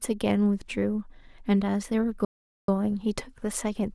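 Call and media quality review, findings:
Playback stall, 2.25–2.68 s: speech cuts to silence for about 430 ms mid-flow, then carries on. Likely the player starving for data or its thread getting blocked.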